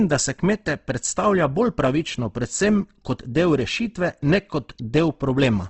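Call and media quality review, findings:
Whole clip: speech grainy and rough, plainly audible codec damage, nothing above 8.2 kHz. Likely Opus compression in CELT mode, wideband, sound fitting roughly 16 kbps. Starved bands get filled by folding or noise, hence grit instead of swirl. Worth bumping the rate.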